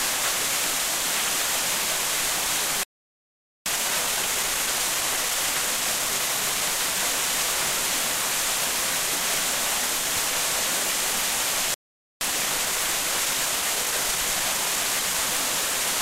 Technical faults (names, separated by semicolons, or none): playback stall; time-compressed catch-up